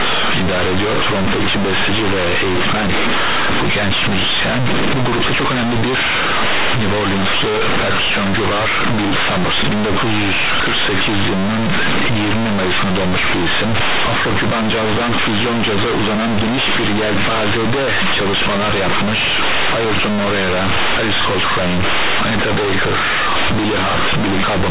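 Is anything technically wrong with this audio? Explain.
Yes. Companded audio read as linear runs throughout the speech. The bytes were most likely stored as mu-law but played as plain 8-bit samples with no expansion, so every sign change swings across half the range. Quiet passages become as loud as peaks, producing harsh, buzzy distortion and heavy noise in pauses, all within telephone bandwidth.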